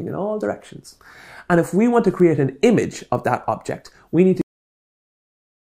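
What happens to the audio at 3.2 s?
At 3.15 s there's a bit error spike: a single sample gets one bit flipped somewhere in memory or on a digital link, so its value jumps by a power of two and snaps straight back. You hear it as one sharp, broadband tick that has nothing to do with the surrounding sound.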